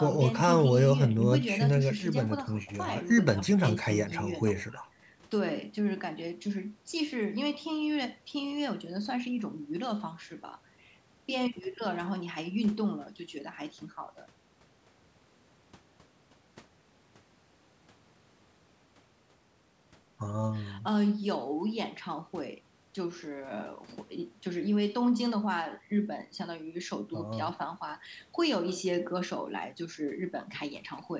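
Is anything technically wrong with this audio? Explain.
No, nothing in this speech clip points to a technical fault. It has been through a call's microphone processing, which leaves nothing above 8 kHz and trims the lowest bass, as that path normally does.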